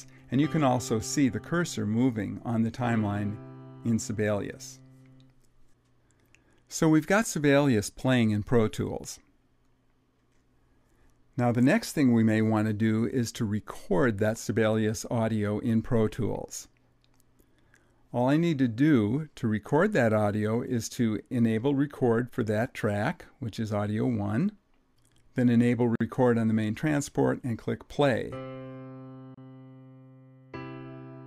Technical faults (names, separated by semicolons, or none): gap at a join of encoded pieces